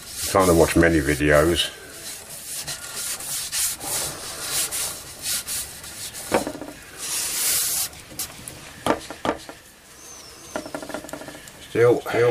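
From 8.19 s to the end, a doubled audio track appears: a second, somewhat quieter full-band copy trails by roughly 400 ms, starting abruptly, likely from a slower duplicate capture path.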